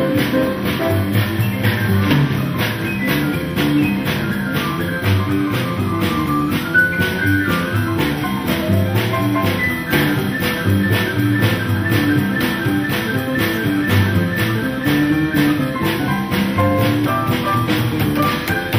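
Nothing is technically wrong with this clip.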